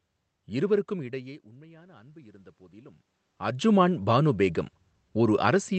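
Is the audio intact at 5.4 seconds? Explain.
Yes, the audio is intact at 5.4 seconds, with no fault at that moment.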